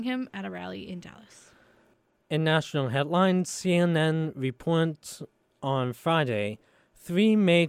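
No technical faults can be heard anywhere in the audio. The speech continues unbroken, with nothing that points to a problem in capture, processing or playback.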